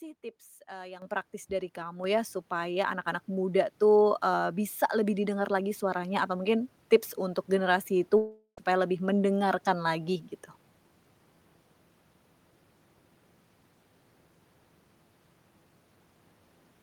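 Microphone volume stepped up at 1.02 s and again at 2.04 s: the input gain was raised in single jumps of about 10 dB, then about 4 dB, lifting speech and background together.

Long network dropout from 8.17 to 8.59 s: about 0.4 s of audio is lost, likely in transit, and is replaced by a fading continuation of the last sound and a short silence before speech resumes.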